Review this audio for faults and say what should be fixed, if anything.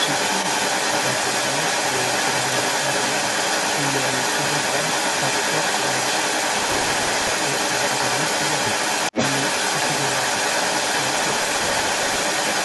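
Echo leak, throughout the clip: the far end's echo canceller likely let part of its loudspeaker pickup through, so a delayed copy of the speech returns about 435 ms after the original, at a level of roughly 10 dB relative to the speech. Better echo cancellation at that end, or a headset instead of a loudspeaker, would prevent it.

Processor overload crackle, 6.59 to 7.32 s and again 11.16 to 12.23 s: the processor fell behind and skipped many short audio buffers in a row, which fits blocks of about 5 ms being dropped on the order of a hundred times. Each skip leaves a hard-edged gap, so the speech is overlaid with gritty tearing. Freeing processor headroom or enlarging the audio buffer would prevent it.

Speech suppressed in double talk, 9.11 to 9.16 s: with both sides likely talking at once, the echo canceller could not separate the near talker from the echo and turned everything down. 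The speech dips sharply, by about 15 dB, for a brief moment. A canceller with better double-talk detection would prevent it.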